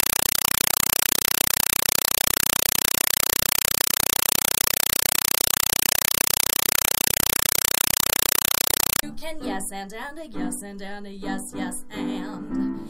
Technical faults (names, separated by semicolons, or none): compressed stream played as audio